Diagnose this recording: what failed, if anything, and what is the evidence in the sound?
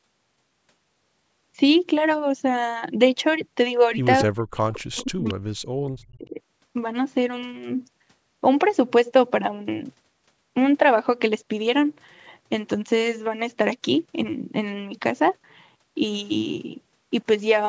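Speech suppressed in double talk points to the call's echo canceller, which likely confused overlapping talk with its own loudspeaker echo and turned everything down. From 4.23 to 6.38 s the speech dips and breaks up, about 2 s affected in total, dropping by about 40 dB at its deepest.

Echo leak, also in call processing, likely comes from an echo canceller that left part of the loudspeaker pickup in its microphone signal. Inside that same stretch, at 4.73–4.78 s and 5.28–5.34 s, short scraps of a delayed copy of the speech come through, 226 ms late and about 20 dB below it.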